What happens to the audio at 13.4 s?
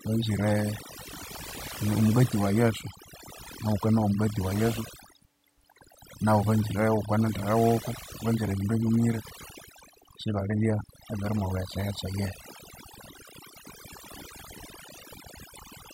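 At 13.4 s the speech is still under the overdone noise removal that runs through the whole clip. A noise reduction stage set far too aggressively keeps cutting individual frequency bands down or out whenever they sit close to its noise estimate, and it takes the softer parts of the voice along with the noise. The result at this moment is a lowered background broken up into twinkling specks.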